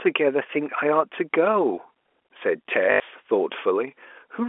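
A speech recording carried over G.711 telephone coding, with the band held to about 300 Hz to 3.4 kHz. At 2.92 s there is packet loss with the last packet repeated. The receiver replays old audio until 3.0 s, filling an 80 ms gap. That length fits four lost 20 ms packets. The repeated packets produce a brief robotic stutter buzzing near 50 Hz.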